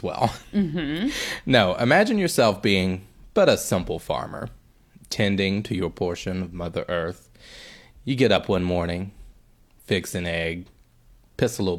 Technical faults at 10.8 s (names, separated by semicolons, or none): none